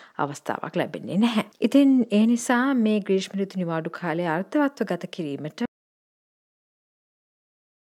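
Audio dropout to silence begins at 5.66 s and runs to the end: the sound cuts off mid-flow into complete silence with no room tone, most likely because the input was lost while the recorder kept writing silence, so everything after that point is gone.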